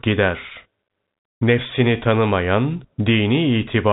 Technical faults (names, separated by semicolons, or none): none